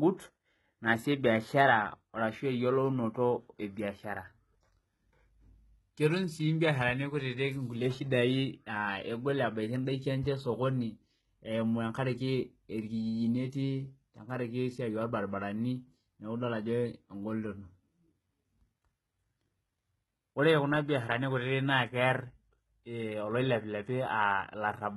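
Throughout the speech there is heavy codec damage, most likely from HE-AAC compression at a very low rate, consistent with roughly 16 kbps. The upper band is not the original signal but a reconstruction from lower frequencies, fitted to a coarse envelope, so its harmonics fail to align with those below the crossover. Sibilants come out gritty and metallic, with a lisping quality, and the spectrum is empty above about 11.8 kHz.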